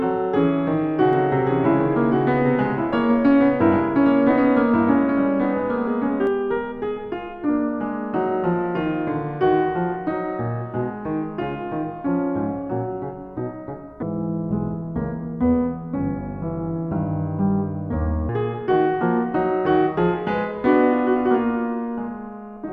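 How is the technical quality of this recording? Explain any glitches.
The music has two clear technical faults: an audible doubled passage near the start and a slowed-down section later on.

From 1.13 to 6.27 s there is a doubled audio track. A second, full-band copy of the music runs about a second behind the original at roughly 5 dB lower. It has no reverb or tonal colouring, and it cuts in and out abruptly at those boundaries. The likely cause is a second capture through a slower path or an edit that left two copies overlapping and out of sync.

From 14.03 to 18.29 s there is a section at the wrong speed. Playback drops to 0.664 times the original rate, so pitch and tempo fall together. The music sounds deep and dragging, around seven semitones lower, and it snaps back to normal at 18.29 s. This is most likely a segment played or rendered against the wrong clock during editing or playback.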